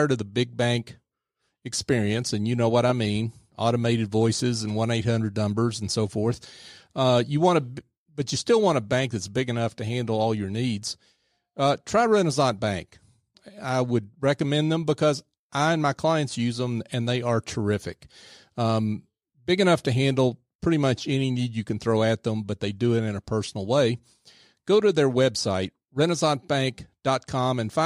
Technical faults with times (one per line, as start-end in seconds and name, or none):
none